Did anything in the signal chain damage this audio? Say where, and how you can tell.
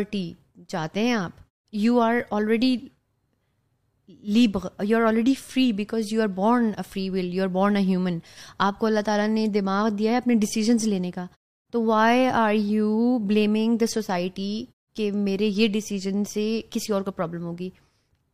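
No, the speech comes through intact, with the output dropping to silence in the pauses and returning in time for each next phrase, which is the normal behaviour of muted pauses rather than damage from any stage of the chain.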